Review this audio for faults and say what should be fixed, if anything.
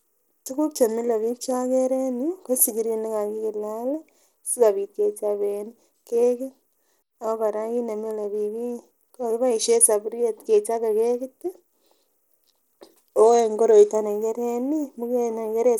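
The speech has a gritty, swirly edge throughout, with the top end thinning out and flickering. That points to likely Bluetooth SBC compression at a low bitpool, maybe around 96 kbps, starving the upper sub-bands and coarsely quantising the rest. To prevent it, record over a wired connection or a higher-quality codec instead.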